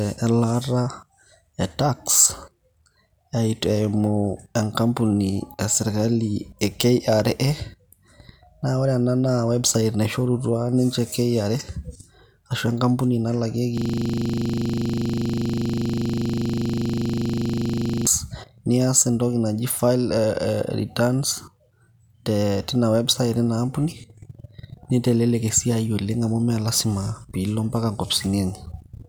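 From 13.78 s to 18.07 s the speech gives way to a rapid, rattling buzz at 25 Hz as one 40 ms fragment repeats exactly, over a hundred times. This is a system hang loop: the system froze while the audio hardware kept replaying the same ring buffer.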